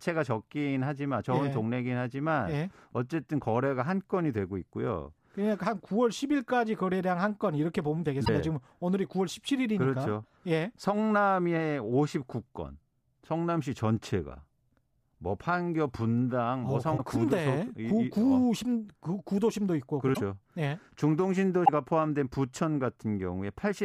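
The speech breaks up briefly at 8.24 to 8.29 s, 16.97 to 17.00 s, 20.13 to 20.17 s and 21.64 to 21.69 s. Each time it jumps ahead. The likely cause is a broken MP3 bit reservoir. Frames were cut out, so the next frames looked back for borrowed data and decoded the wrong bytes. Each break spans one or two frames, which fits 26.1 ms MP3 frames.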